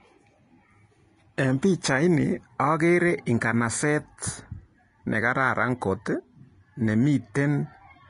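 Speech runs through the whole clip with plainly audible Vorbis compression damage. Nothing is present above 10.6 kHz, and the treble just below that limit sounds hissy and granular, as if fine detail had been replaced by noise of similar energy. Consonant onsets are smeared and voiced tones have a rough edge. The cause is likely coarse Vorbis residue quantisation, which fits a low bitrate of around 32 kbps.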